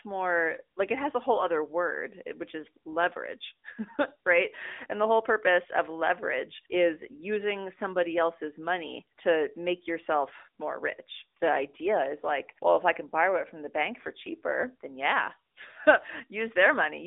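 Throughout, the speech sounds boxed-in and buzzy, held between 250 Hz and 3.7 kHz with nothing above 3.8 kHz. This is the AMR narrowband mobile codec. Its pulse-driven vocal-tract model adds a plainly synthetic edge that fits a mid-rate mode near 10 kbps.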